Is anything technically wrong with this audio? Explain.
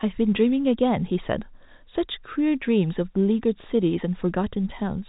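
No, nothing is technically wrong with this audio; it is telephone-band speech passed through G.711 coding, with nothing above about 3.8 kHz.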